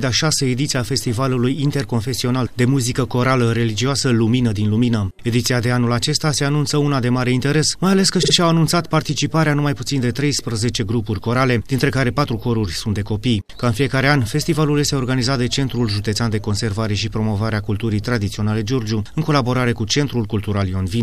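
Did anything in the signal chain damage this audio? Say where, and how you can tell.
Yes: repeated frames at 8.22–8.32 s, a codec-stream or storage fault. A 52 ms compressed block plays twice more, giving an audible stutter and lengthening the audio by 104.5 ms.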